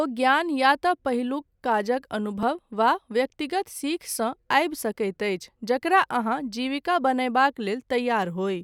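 A brief click at 2.43 s in the speech is a repeated buffer. New audio did not arrive in time, so the device replayed the previous tiny chunk of about 1.33 ms once more, which fits a 64-sample buffer. The hard joins make the click, and almost no audio is lost.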